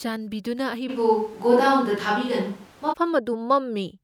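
At 0.91 s the speech suddenly goes roomy and hollow, with the low end thinned out, then snaps back to close and full at 2.91 s. That abrupt shift points to a switch to a distant microphone, likely after the close mic dropped out. Loudness holds steady, and background noise sits roughly 30 dB under the speech.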